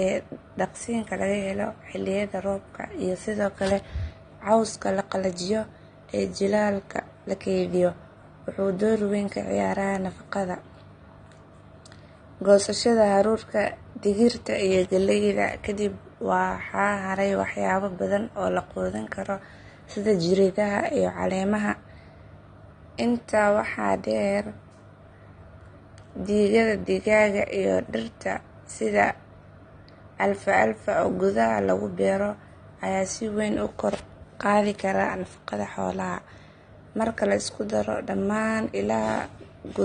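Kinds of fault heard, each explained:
Low-bitrate audio saved at a high bitrate: the speech sounds dull and compressed throughout, with nothing above 9.7 kHz. It was likely a low-bitrate AAC file, consistent with roughly 32 kbit/s, re-saved as high-bitrate MP3, which cannot restore the discarded detail.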